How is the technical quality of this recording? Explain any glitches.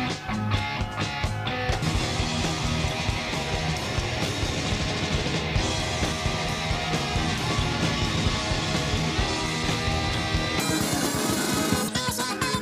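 The recording has one clear fault, near the end. From 10.60 s to 12.62 s the audio was read two samples at a time (double speed): the reader treated each pair of samples as a single frame. The sound therefore plays at 2x speed and jumps up an octave, 12 semitones higher.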